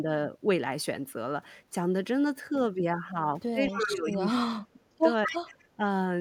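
An echo canceller on the loudspeaker side, likely failing to remove its own loudspeaker output, lets an echo leak through from 3.68 to 3.87 s: a copy of the speech returns 229 ms late, about 10 dB below it. The same canceller, likely unable to tell its talker from the loudspeaker echo during double talk, suppresses the speech from 3.68 to 4.1 s, dipping it by around 10 dB. The echo returns briefly at 4.12 to 4.17 s, at the same delay but far weaker, around 25 dB down. Suppression then cuts the speech from 4.29 to 4.81 s by as much as 35 dB, so it nearly drops out. From 5.26 to 5.84 s the speech dips by about 15 dB, with a 229 ms echo at about 10 dB down from 5.27 to 5.37 s.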